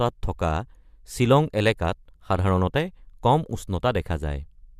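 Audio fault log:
No faults heard anywhere in this speech recording.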